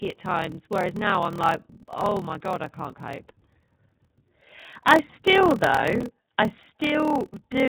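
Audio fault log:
throughout iLBC codec. The whole band stops near 4 kHz, so the sound is narrow and boxy. Speech has a rough, synthetic grain, and the codec damage is plainly audible. Each frame's excitation is coded on its own. The texture fits iLBC's 30 ms frame mode at 13.33 kbps. The low rate leaves too few bits to rebuild fine detail.
throughout block size mismatch (padded). A steady buzz at 38.3 Hz rides under everything. Each block written holds fewer samples than the next stage reads, and the shortfall is filled with zeros. That makes a tiny silent gap in every block, and the gaps repeat at the block rate. The audio also runs slow, at 0.889 of normal speed, while the pitch holds. That points to 1024-sample blocks read as about 1152.
5.52 to 6.03 s processor overload crackle. A gritty burst of tearing sits just before "I still". The processor missed about ten short buffer deadlines over that stretch, each roughly 5 ms. 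Every miss left a brief hole of silence with hard edges. Those clicks run together into a rough crackle laid over the sound. It stops at 6.03 s, once the load eases and buffers arrive on time again.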